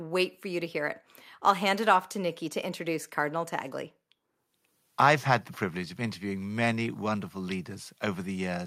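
No technical faults are audible anywhere in the recording.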